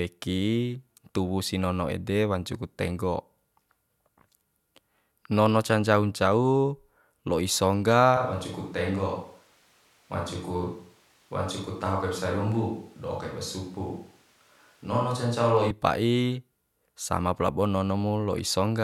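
From 8.17 s to 15.70 s the speech turns abruptly roomy and hollow, thinner in the bass, about 5 dB quieter and over a noisier floor, likely a switch to a distant microphone. The waveform steps down there, and the spectrogram loses low-end energy and fills between words.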